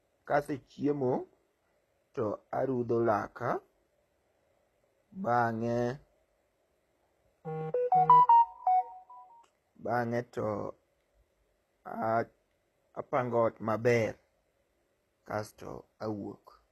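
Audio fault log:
Throughout, HE-AAC compression: the speech carries plainly audible codec damage, and nothing is present above about 12.3 kHz. The upper band sounds bright yet synthetic, with s sounds coming out gritty and lispy, because the treble is likely rebuilt by spectral band replication from copied lower bands rather than coded directly, so its harmonics fail to line up. The very low data rate this implies, around 16 kbps, fits that. A plain low-pass would leave the top dull instead.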